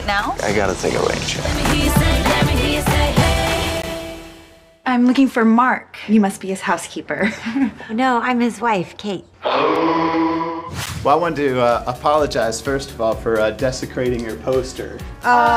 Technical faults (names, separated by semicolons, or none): block of digital silence